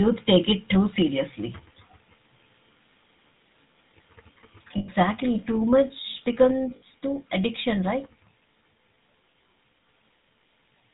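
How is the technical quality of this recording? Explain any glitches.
The recording has limited quality: the whole clip is band-limited and rough, and it has two brief dropouts and one sudden level drop.

Throughout, the speech sounds buzzy and gravelly, with nothing audible above 4 kHz. That points to the GSM full-rate codec at 13 kbps. It models the vocal tract and drives it with a sparse, regularly spaced pulse excitation, so the fine detail of the voice is lost.

At 4.78 to 4.89 s, and again at 6.76 to 6.83 s just before "too addiction right", the sound freezes into a short, rough, metallic ring. These are lost GSM frames. The decoder fills each gap by repeating the last good frame's settings, for 100 ms and then 60 ms. That fits about five and three 20 ms frames.

At 6.51 s, just before "too addiction right", speech and background both drop suddenly by about 3 dB. The likely cause is the microphone volume being stepped down: the call software judged the input too loud and lowered the device's gain in one step.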